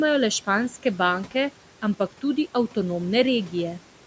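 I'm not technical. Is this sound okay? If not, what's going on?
No. The call's noise suppressor, meant to remove background sound, mistook parts of the speech for noise and turned them down along with it. This is speech cut by the noise suppressor, and it happens three times: from 1.25 to 1.35 seconds, from 1.99 to 2.23 seconds, and from 2.54 to 2.76 seconds. In those moments the speech briefly goes faint or sounds swallowed. The quieter room sound underneath belongs to the recording itself.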